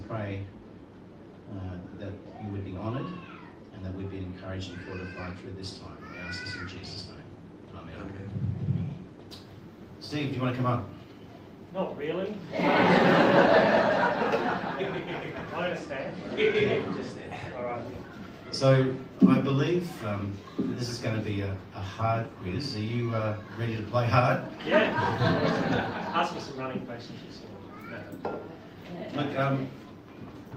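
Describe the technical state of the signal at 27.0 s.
At 27.0 s the signal is intact, with no audible technical fault at that moment.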